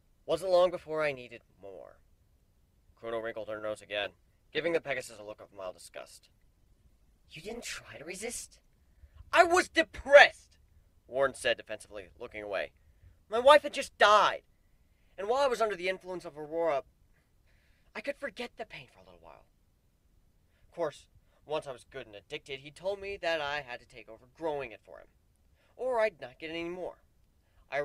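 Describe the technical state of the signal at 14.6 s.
Nothing at 14.6 s suggests a technical fault; the signal there is intact.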